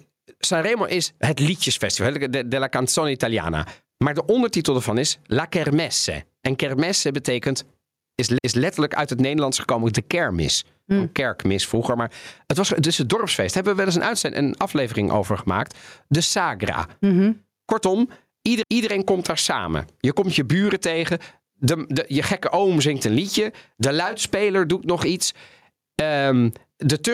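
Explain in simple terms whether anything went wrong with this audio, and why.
Throughout this speech, loud and soft parts end up closer in level, so everything sounds squashed. That is gain pumping, likely caused by the microphone level being set far too high, with an automatic limiter then pulling it down on every loud sound.

There are two small stutters where a quarter-second of audio plays twice: at 8.38 s, right after "kermesse betekent is" and before "uit het", and at 18.63 s, just before "komt daar samen". These are overlapping chunks. The audio was handled in 10-second pieces, each starting slightly before the previous one ended.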